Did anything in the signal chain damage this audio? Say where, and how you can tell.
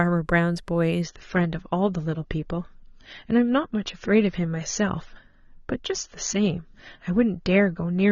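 Yes. From 1.02 s to the end of the speech, the stream drops to a lower-bitrate version, an adaptive stream at a lower bitrate. The change is abrupt but gapless. Above 6.9 kHz the spectrum goes empty, and coding artefacts thicken. The stage is the network feeding the codec: throughput fell, so the player switched renditions mid-stream. The band limit fits an AAC-LC encode at around 24 kbit/s, down from something near 96 kbit/s earlier.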